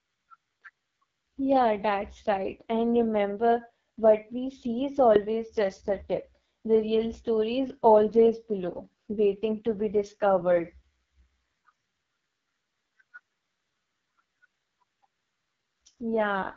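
From start to finish the speech carries AMR wideband (HD Voice) codec damage. It sounds rough and raspy, with nothing above 7.2 kHz. The heavy degradation points to the lowest 6.6 kbit/s mode, where the pulse-driven vocal tract model cannot keep up.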